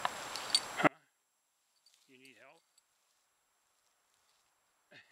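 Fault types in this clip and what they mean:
One channel inverted: from 0.87 s to the end, the level falls by about 39 dB and the sound all but disappears, leaving only a faint residue. That depth of cancellation points to one stereo channel likely having its polarity reversed, so that when the two channels are summed to mono, everything they share cancels out. What remains is only the small difference between them, which means the two channels carry nearly identical material.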